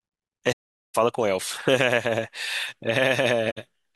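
From 0.52 to 0.96 s and again from 3.51 to 3.58 s the speech falls into silence, which is AAC frame loss with muting. The missing frames are decoded as zeroed spectrum, so the overlapping windows fade the sound out and back in rather than cutting it. Those soft edges distinguish it from a hard dropout.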